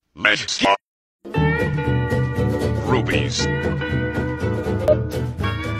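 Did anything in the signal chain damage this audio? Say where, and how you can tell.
Yes. A brief glitch breaks into the sound from 4.88 to 4.93 s, pointing to damaged data in a compressed stream at the codec stage: corrupted bytes left the decoder misreading frames there until it lost sync and locked onto the next valid frame header.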